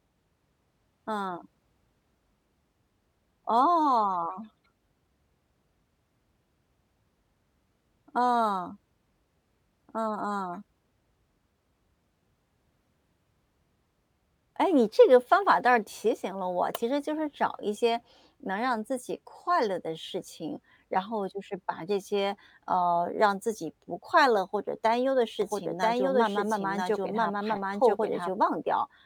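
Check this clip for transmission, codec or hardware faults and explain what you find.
One fault appears near the end of the speech: a doubled audio track from 25.42 to 28.30 s. The likely cause is a second capture of the same signal through a slower path, or an edit that leaves two copies out of step, so both get mixed together. The result is a full-band echo trailing roughly a second behind at about the same loudness, dry and without room colour, cutting in and out abruptly at those boundaries.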